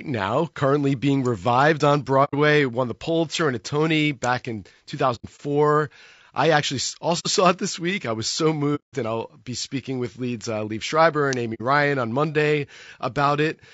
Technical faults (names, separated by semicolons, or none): low-delay AAC compression; AAC frame loss with muting; electrical switching spike